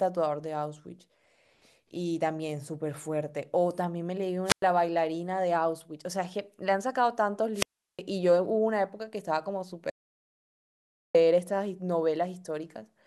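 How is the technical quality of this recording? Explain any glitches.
The recording is marred by three interruptions, two from the wireless link and one complete cut to silence.

At 4.45 to 4.63 s and again at 7.53 to 8.01 s, the speech is broken by a wireless microphone squelch dropout. Hiss or static swells briefly, then the sound is muted for about 104 ms and about 362 ms. The FM radio signal faded so far that the receiver's squelch closed.

From 9.90 to 11.15 s there is an audio dropout to silence. The speech stops abruptly mid-flow and leaves 1.25 s of total silence with no room tone at all, then resumes. The likely cause is a lost input that the recorder kept filling with silence, so that stretch is simply gone.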